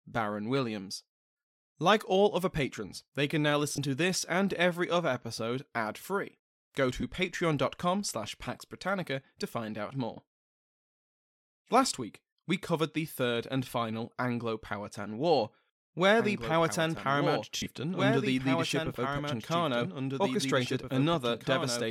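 Lost LE Audio frames at 3.70 to 3.78 s, between "patrons they can now" and "to this and every", take out about 60 ms of sound scattered over 80 ms, with the longest gap roughly 30 ms. The LC3 decoder covers each missing frame by repeating the last spectrum with randomised signs, so the sound briefly turns into a hissy smear. A shorter 20 ms loss at 7.01 s gives a quick grainy blip, which fits two 10 ms frames.

A doubled audio track starts abruptly at 16.20 s and runs to the end. A second full-band copy of the same sound trails about two seconds behind, roughly 5 dB quieter, with no decay or room colour. It is likely a second, slower capture path or an edit holding two out-of-step copies.

Lost LE Audio frames return at 17.56 to 17.66 s, where about 90 ms goes missing across 100 ms, with one run of roughly 70 ms. That is long enough for the concealed, sign-scrambled spectrum to fade toward silence before the sound resumes.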